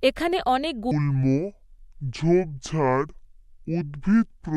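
At 0.91 s the speech drops into a section at the wrong speed that runs to the end. From that moment it plays at about 0.6 times its proper rate, so the voice turns deep, slow and drawn out, roughly ten semitones lower. The likely cause is playback or editing on a mismatched clock. Pitch and tempo sink together, which sets it apart from a pitch shift that leaves the timing intact.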